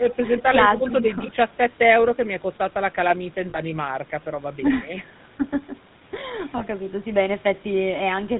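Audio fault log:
Throughout: GSM full-rate codec. The speech is plainly damaged by this early mobile-phone codec, whose coarse character fits its 13 kbps rate. It models the vocal tract as a filter and excites it with a sparse, evenly spaced pulse train that keeps only one sample in three, so the voice comes out buzzy and gravelly rather than smooth. Nothing above 4 kHz survives, which leaves the sound dull and narrow-band.
3.50–3.60 s and 6.58–6.63 s: lost GSM frames. The first gap lasts 40 ms, which fits two missing 20 ms frames. The second lasts 20 ms, which fits one. In each gap the decoder kept re-using the parameters of the last good frame instead of producing fresh speech. That recycled excitation is heard as a brief rough, metallic ring where the sound should have moved on.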